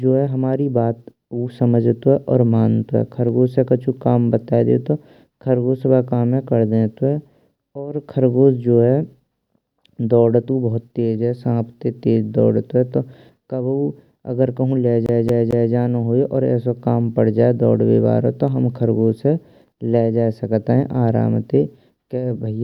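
At 15.06 s the speech catches in a CD stuck on one turn, lasting until 15.73 s. A scratch keeps knocking the laser back one track, so the same 0.22 s of audio plays three times in a row, each pass cut off by a brief mute at the jump. It sounds like a fast, even stutter. On the waveform, three identical blocks repeat side by side with thin gaps between them. The spectrogram shows the same pattern stamped three times in a row.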